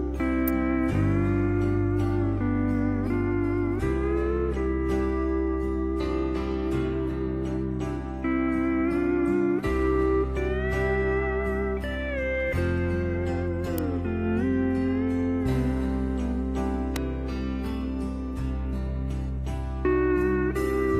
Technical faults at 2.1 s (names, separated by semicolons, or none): none